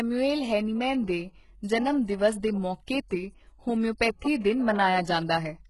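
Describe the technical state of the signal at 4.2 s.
At 4.2 s there is pre-echo, from 4.19 to 4.22 s. Codec noise spreads about 30 ms ahead of an attack, so a short hiss precedes it and the onset smears.

The speech also carries heavy damage, likely from HE-AAC compression, fitting about 12 kbps. Replicated treble ends near 11.5 kHz and makes sibilants gritty and metallic.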